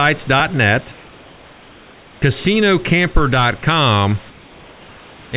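From 0.92 to 2.22 s, comfort noise replaces the background: the room noise gives way to a smoother synthetic hiss about 2 dB quieter, likely from discontinuous transmission. At 2.2 s, the onset is clipped by the voice detector: 20 ms is missing, so the speech starts abruptly, likely because detection lagged. From 4.30 to 5.32 s, the same comfort noise substitution recurs at about 2 dB lower.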